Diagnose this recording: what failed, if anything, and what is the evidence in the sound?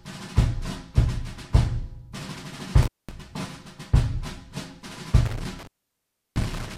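Intermittent contact in the analogue wiring: a loose cable or plug opens briefly, at 2.83–3.11 s (line open about 210 ms) and 5.26–6.77 s (about 689 ms). Each break drops the sound with crackle at its edges. The waveform collapses to a low residue, and the spectrogram shows broadband vertical clicks framing each gap.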